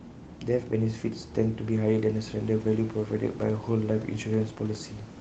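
Nothing stood out on listening to this speech recording.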